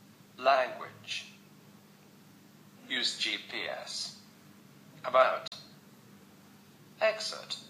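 At 5.48 s the audio cuts out, leaving a silent gap of about 40 ms before it resumes at 5.52 s, a little further along as if it had kept playing. This is likely a Bluetooth dropout, with a couple of packets missing. On the waveform and spectrogram it shows as an empty vertical band.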